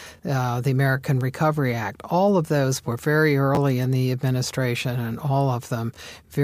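Chunks out of order at 3.55 to 3.57 s, just after "of those were very" and before "in the administration and": one 10 ms chunk of speech plays a single chunk late, after the chunk meant to follow it. The swap leaves three hard joins, heard as a brief jumbled blip.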